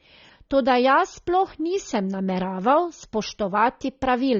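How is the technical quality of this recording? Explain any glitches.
The recording has one clear problem running the whole way through: plainly audible lossy compression. Throughout the clip, the speech sounds dull and smeared, with a fizzy, warbly edge on sibilants and held sounds. That's likely AAC compression at a low bitrate, which fits roughly 24 kbps AAC-LC. At that rate the encoder drops the top end and quantises coarsely, leaving gaps it patches with noise.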